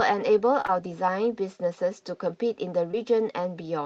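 Speech over a call link, with short concealed packet loss in three spots: around 0.61 to 0.76 s, overlapping a second gap near 0.66 to 0.70 s, and again at 2.91 to 2.95 s. Each is roughly 20 ms of missing audio patched by stretching the preceding sound, so you hear brief smears or wobbles.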